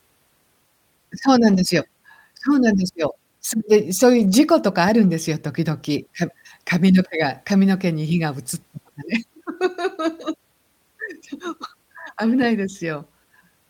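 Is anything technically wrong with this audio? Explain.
Yes. The speech turns briefly rough and grainy, with no gap, at 1.49–1.59 s, 4.15–4.33 s, 5.03 s and 11.63–11.65 s. This is a lost packet rebuilt from error correction: the decoder played coarse low-bitrate copies carried in following packets, consistent with runs of 20 ms frames.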